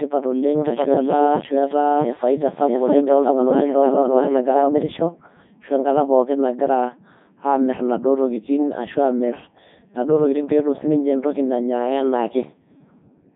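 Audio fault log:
Throughout, Codec 2 vocoder: the speech is rebuilt from sine waves driven only by pitch, voicing, energy and a spectral envelope, so it comes out robotic and buzzy with heavy damage. It runs at the top 3.2 kbit/s mode. The band runs from 150 Hz to 3.7 kHz with nothing above 3.8 kHz. Unlike a plain narrowband phone line, the original waveform itself is gone, leaving a synthetic, machine-like voice rather than merely a muffled one.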